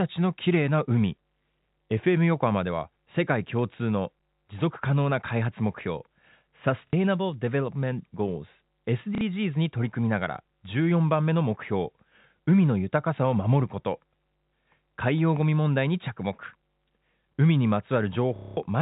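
Around 6.87 to 6.93 s the speech hiccups, then does the same at 9.15 to 9.21 s. Both are 60 ms of packet loss with the last packet repeated: the receiver kept replaying its most recent chunk until fresh ones arrived, which fits 30 ms packets. The longer 210 ms run at 18.36 to 18.57 s turns into a robotic buzz near 33 Hz, heard over narrowband G.711 telephone audio.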